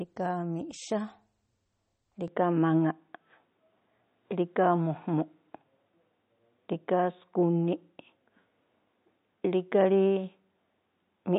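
From the start, the audio has most likely been through heavy MP3 compression, consistent with a low bitrate around 32 kbps. Short of bits, the encoder discards everything above 8.4 kHz and drops weaker frequency lines, which flicker in and out between frames. The speech sounds plainly processed, with a watery, swirling texture, metallic chirps on s sounds, and softened consonant onsets.

At 2.28 s the input was likely switched to a poorer device, and it stays that way to the end. The replacement passes nothing above 3.8 kHz, so the speech turns abruptly duller and boxier, with no gap at the changeover. The level shifts by about 5 dB, and a new background noise appears, sitting far below the speech at roughly 55 dB down.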